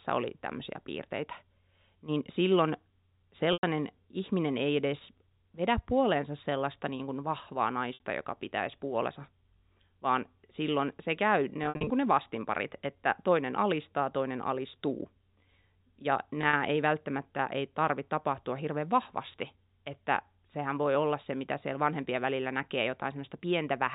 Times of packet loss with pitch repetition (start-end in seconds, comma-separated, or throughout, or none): 3.53-3.63, 7.94-8.00, 11.64-11.90, 16.41-16.53